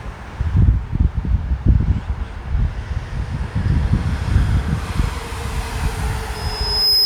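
From 6.34 s to the end at 7.05 s, a 5.1 kHz tone swells over about half a second into a loudspeaker feedback squeal, about 5 dB above the sound, as microphone and speaker form a runaway loop.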